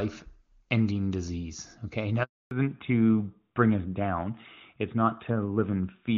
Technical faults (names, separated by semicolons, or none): handover gap; fallback to narrowband